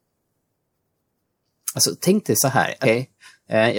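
A speech recording with one dropout worth flagging: at about 2.84 s there's a case of compressed frames skipped, where the playback jumps forward and you lose roughly a fifth of a second of speech. The frame length works out to 26.1 ms, so that's around seven frames either missing from the file or rejected by the decoder as corrupt.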